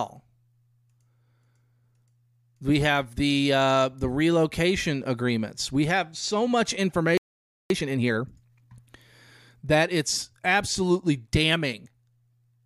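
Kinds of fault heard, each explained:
Playback stall: Right after "have so much", the speech cuts to silence from 7.18 to 7.70 s, a gap of about 0.53 s, then resumes. The likely cause is the player running dry of buffered data or its output thread being held up. Unlike a brief dropout, which lasts only milliseconds, this pause is long enough to register as a hitch in the middle of the phrase.
Time-compressed catch-up: From 7.70 to 8.74 s, after the stall, the speech runs at about 1.5 times normal speed while the pitch stays unchanged. The player is clearing the backlog from the pause by removing small slices of audio and cross-fading the joins. A plain speed-up, like a tape played fast, would also raise the pitch. Here the voice keeps its pitch and only the pace is hurried.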